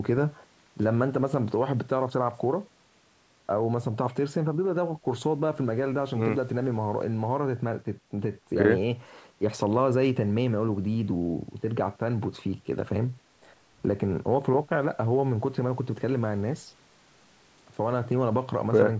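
Nothing here counts as a fault: the speech has simply gone through a call's microphone processing, so the lowest bass is trimmed away and nothing sits above about 8 kHz, which is just how that path sounds.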